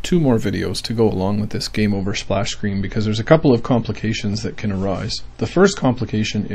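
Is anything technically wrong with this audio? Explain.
Yes. From 1.93 s to the end, the audio shows an adaptive stream at a lower bitrate. The player appears to have switched to a leaner version of the stream when the connection could no longer sustain the original, and the sound suggests a drop from roughly 128 kbit/s MP3 to about 32 kbit/s. The change is abrupt but seamless, with no gap. Past that point nothing remains above 8.3 kHz, so the top end turns dull, and compression artefacts become more audible.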